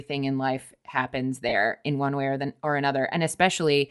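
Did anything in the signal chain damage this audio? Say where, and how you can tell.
Yes. At the codec stage, a plainly audible breathy, grainy top end runs throughout, likely Bluetooth LC3 compression filling zeroed upper bands with noise, unlike steady band-limiting.

In transport, lost LE Audio frames at 1.49 to 1.53 s leave a 30 ms noisy smear instead of a silent gap. That fits four 7.5 ms frames concealed by reusing the last spectrum with random signs.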